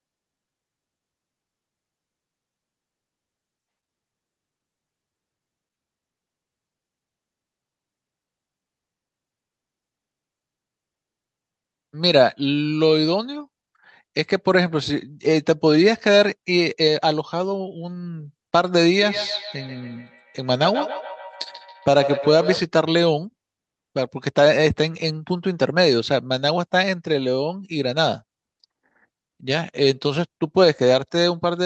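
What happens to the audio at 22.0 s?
At 22.0 s the clip is inside a feedback echo between two devices, running from 19.02 to 22.67 s. Two devices in the same room share the call, so one device's loudspeaker feeds straight into the other's microphone, and neither echo canceller removes sound it didn't play itself. Each syllable returns roughly every 150 ms, thinner and more metallic with each pass, with the repeats reaching about 9 dB below the direct speech.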